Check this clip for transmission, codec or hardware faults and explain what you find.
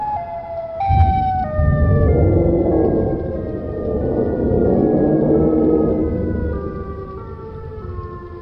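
Nothing in the clip points to a transmission, codec or hardware fault. No dropouts, glitches or damage turn up anywhere in the audio.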